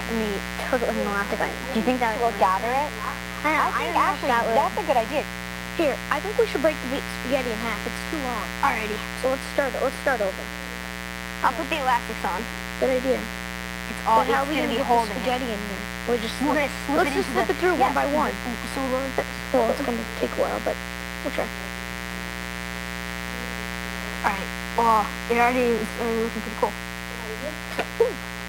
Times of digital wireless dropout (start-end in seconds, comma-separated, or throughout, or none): none